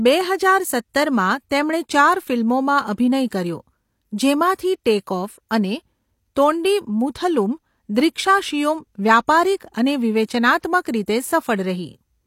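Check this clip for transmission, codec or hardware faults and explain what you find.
One codec fault is present in this speech. Pre-echo, 10.26 to 10.29 s: transform-block quantisation noise spreads about 30 ms ahead of a sharp attack, heard as brief hiss and a smeared onset.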